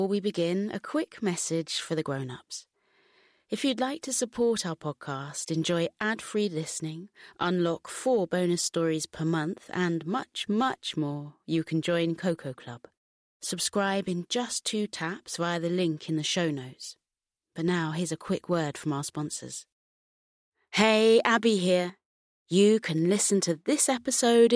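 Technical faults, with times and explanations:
No technical faults can be heard anywhere in the speech signal.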